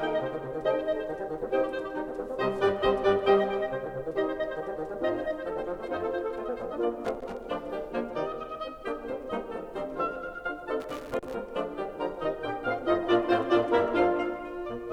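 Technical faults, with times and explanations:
7.05–7.37 s and 10.80–11.35 s: loose connector crackle. The music breaks into irregular scratchy bursts as a worn contact rapidly makes and breaks, chopping the signal.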